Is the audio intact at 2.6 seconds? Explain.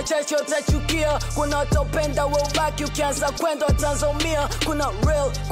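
Yes, at 2.6 seconds the audio is intact, with no audible fault at that moment.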